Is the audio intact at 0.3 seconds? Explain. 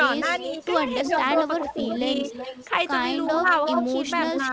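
No. Speech is suppressed in double talk from 0.2 to 0.63 s. The level dips shallowly, around 5 dB at most, for roughly 150 ms in all. The likely cause is an echo canceller that could not separate the talker from loudspeaker echo, so it turned both down.

An echo leak also runs from 0.23 to 2.68 s. A copy of the speech returns 371 ms late, only a few dB below the direct sound. It is likely residual loudspeaker pickup that the far end's canceller failed to remove.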